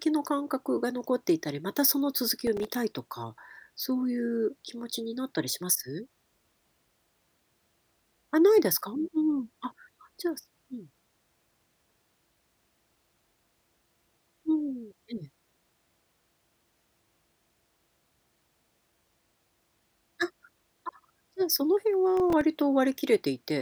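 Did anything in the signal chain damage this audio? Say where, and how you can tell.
Yes, at the driver or buffer stage. There's processor overload crackle from 2.37 to 2.75 s and again from 22.17 to 22.41 s, gritty bursts riding on the speech. The processor kept missing deadlines on very short buffers, roughly 1.5 ms each, and every miss left a hard-edged sliver of silence.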